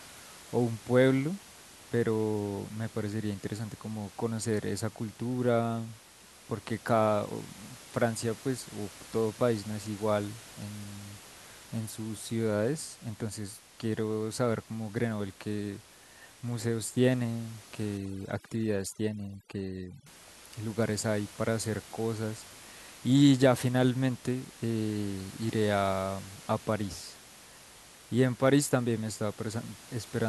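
From 17.97 to 20.06 s the room noise, elsewhere about 20 dB below the speech, drops and breaks up into twinkling specks. That is overdone noise removal: the reduction clamps down every band sitting near its noise estimate, taking quieter speech detail with it.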